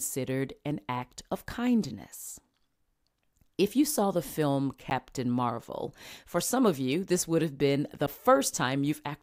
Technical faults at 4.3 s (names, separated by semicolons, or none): none